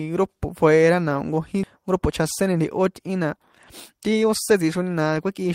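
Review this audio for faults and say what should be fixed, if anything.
At 1.63 to 1.65 s the speech skips ahead: roughly 0.4 s of audio is discarded and the two sides are spliced almost directly, with no silence or concealment filling the hole. That distinguishes it from a dropout, which leaves an audible gap. A larger jitter buffer that tolerates delay bursts without overflowing would prevent it.

Two jitter buffer speed-ups follow. From 1.78 to 3.38 s the speech runs at 107% speed, and from 3.92 to 4.69 s at 106%. The buffer trims short pitch-period slices repeatedly to shed about 0.1 s and then about 50 ms of excess delay. Pitch stays unchanged, which separates this from resampling. Gentler, more gradual delay reduction would make the catch-up less noticeable.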